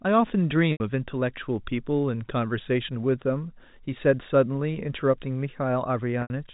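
Speech carried over G.711 A-law telephone coding, with nothing audible above 4 kHz, shows packet loss with pitch repetition at 0.72–0.80 s and 6.22–6.30 s. Each 80 ms gap, which fits about eight 10 ms packets, is bridged by repeating the last pitch period. That repetition fades to silence before the speech cross-fades back in.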